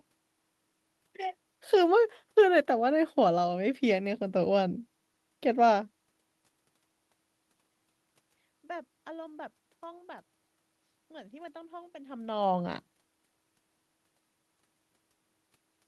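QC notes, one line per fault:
No technical faults can be heard in the signal chain: the steady background noise belongs to the room itself, and the level shifts around 5.5 s and 12 s come from the talker moving relative to the microphone.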